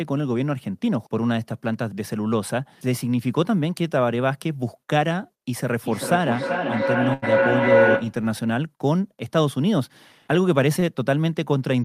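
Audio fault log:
5.85–8.22 s feedback howl: the microphone-to-loudspeaker loop gained level on each pass, so repeats grew into a tone near 500 Hz, pulsing roughly every 0.4 s and peaking about 5 dB above the speech.
7.13–7.24 s and 10.80–10.84 s short stall from a late packet: the jitter buffer ran dry, so the receiver held the last sound for 89 ms and 22 ms, then resumed with nothing lost.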